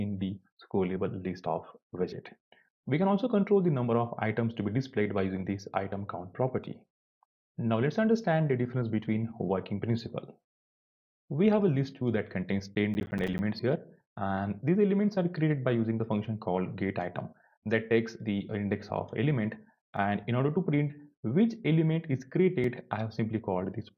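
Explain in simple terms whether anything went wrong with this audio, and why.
Two things went wrong. From 12.75 to 13.39 s there is processor overload crackle. The computer fell behind and missed deadlines for its small audio chunks, about ten milliseconds each. Around fifteen chunks came out as silence, so the sound tears and crackles until the load eased.

There are also two tiny blocks of digital silence, at 19.97 s and 22.64 s. The sound drops to nothing for 1.3 and 2.7 milliseconds, then returns with no fade. The second gap fits a 128-sample block. Each one is heard as a tick or dip.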